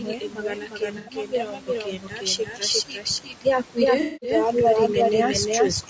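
Right from the start, the whole speech clip carries a doubled audio track: a second, equally loud, full-band copy trails the original by around 400 ms. It has no room colour, just a clean echo of everything said. The likely cause is the sound being captured twice by a slower path.

Throughout, there are also noise suppressor artifacts. The suppressor pulls the room noise down by about 12 dB between phrases, so the background pumps, dropping in gaps and coming back under the speech.

The clip also has low-delay AAC compression. The voice sounds rough and grainy, with noise smeared between harmonics, and the damage is plainly audible. That texture likely comes from AAC-ELD at a low rate, fitting something around 32 kbps, on top of a band that stops at 8 kHz.

From 0.00 to 2.62 s, speech is cut by the noise suppressor. Parts of the speech dip by up to about 12 dB and sound swallowed. The same thing happens briefly at 2.87–3.06 s (about 11 dB) and 3.24–3.46 s (about 12 dB).

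AAC frame loss with concealment hits twice. At 0.98–1.13 s, 90 ms goes missing, which fits three lost frames, and the decoder papers over it. At 4.01–4.33 s, a longer 210 ms gap, fitting seven frames, is filled in before the speech recovers.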